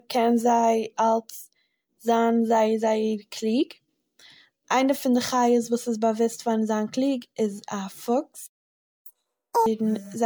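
Across the whole speech clip there is generation loss. The audio sounds swirly, hollow and smeared, and consonant attacks blur more than a single lossy pass would explain. The likely cause is about ten rounds of MP3 re-encoding at around 128 kbit/s, with fresh quantisation noise and spectral holes added on each pass.

At 8.46 s, right after "זיין קליג איז א", a playback stall cuts the output to silence until 9.06 s, a gap of about 0.6 s. The sound halts mid-flow, likely because the player ran short of data or its output thread was blocked.

From 9.06 s to 9.66 s comes catch-up at higher speed. The player runs its backlog at 2.0× by resampling, so tempo doubles and pitch jumps by roughly ten semitones, making the speech sound hurried and squeaky until normal rate resumes.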